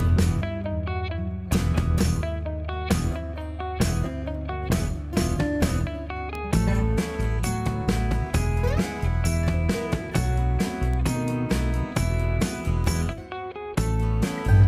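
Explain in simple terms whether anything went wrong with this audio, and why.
Three quick ticks at 6.35, 10.94 and 12.84 seconds are bit error spikes. One or two stored digital values got a bit flipped, so the sound jumped way off for a split millisecond and snapped back. That's a sharp click with no connection to the surrounding sound.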